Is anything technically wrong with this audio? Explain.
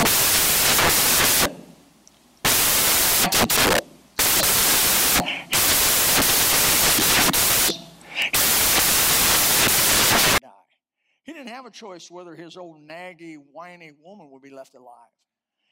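Yes. From 0.0 to 10.38 s the samples are built from the wrong bytes: each value is assembled misaligned or byte-swapped, so the rapidly changing low bits dominate. It sounds like loud, harsh noise, close to white on loud speech, showing a dense, noise-filled waveform and flat broadband spectrogram.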